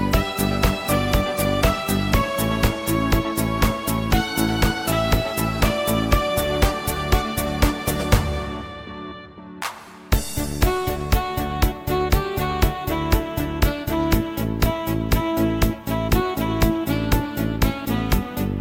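At 2.67 to 2.69 s and again at 14.66 to 14.69 s there is an overlap between stream segments. Two segments claimed the same stretch of time, so roughly 20 ms and then about 30 ms of real audio were discarded. The waveform jumps straight across, giving a tiny skip or click. Unlike a dropout, there is no silent or muted gap, just missing material. The two events are about 12 s apart, which fits a 6-second segment boundary.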